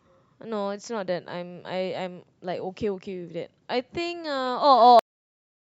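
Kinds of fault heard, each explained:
Cut-off end: the final buffers were never written out, so the speech stops abruptly mid-sound at 4.99 s and drops straight to digital silence with no decay.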